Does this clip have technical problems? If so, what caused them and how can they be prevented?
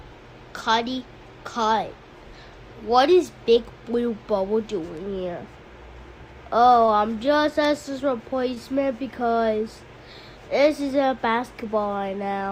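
Yes: short stalls from late packets at 6.86 to 6.90 s and 8.54 to 8.58 s. Each time a packet arrived late, the jitter buffer ran dry and the last sound was stretched for 22 ms and 17 ms, with nothing lost but playback pushed later. A deeper or adaptive jitter buffer would prevent this.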